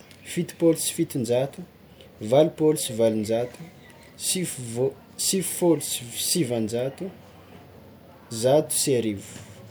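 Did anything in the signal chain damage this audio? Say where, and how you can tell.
No, nothing in the signal chain has damaged this speech recording. No stage shows any sign of trouble at any point in the clip.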